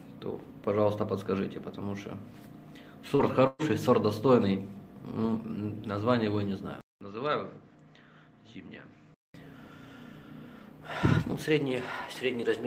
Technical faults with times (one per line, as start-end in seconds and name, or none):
3.15-3.22 short concealed packet loss
3.47-3.62 burst of packet loss
6.81-9.34 input switched to a poorer device